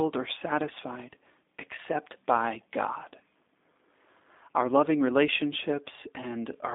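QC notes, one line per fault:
Throughout: G.729 codec. Speech is confined to 250 Hz–3.7 kHz with nothing above 3.8 kHz, and sparse pulse excitation makes it plainly rough and synthetic, fitting 8 kbit/s G.729A.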